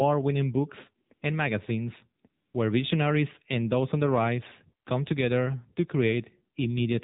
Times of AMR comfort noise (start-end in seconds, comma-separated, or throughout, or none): 1.08-1.22, 2.22-2.54